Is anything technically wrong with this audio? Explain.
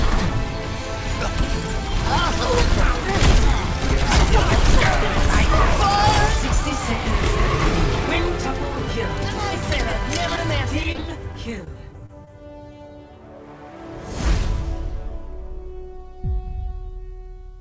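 Yes, there are two packet-loss problems. At 10.36 s there's a short concealed packet loss: about 20 ms of audio arrived too late, so the receiver stretched out the last bit of sound and crossfaded back, leaving a quick smear or wobble.

Then from 10.83 to 12.29 s there's repeated packet loss, with a robotic sound. Gaps keep opening, the longest about 31 ms, and each gets patched by extending what came before. Back to back, those patches make the sound choppy, with small pieces missing.

All of it comes through a call path that's cut off above 8 kHz, which fits a wideband codec like G.722.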